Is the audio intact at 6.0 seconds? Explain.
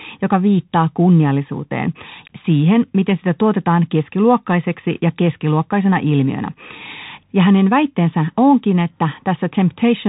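No. At 6.0 seconds, as throughout the clip, the speech is muffled and boxy, with scratchy s sounds, harsh distortion on loud bright moments, and a grainy hiss beneath it. This is the Bluetooth CVSD headset codec. It sends one bit per sample to say up or down, which fits a 64 kbps stream. Its adapting step can't track fast high-level changes. Nothing above about 3.8 kHz survives.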